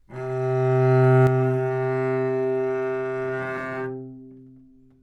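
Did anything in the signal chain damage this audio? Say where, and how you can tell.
Yes. From 1.27 s to the end the sound abruptly drops by about 6 dB and stays there, with nothing recovering. That step is the signature of one channel dropping out, likely a lost stereo leg in the wiring or connector, so the mono sum keeps only half its common content.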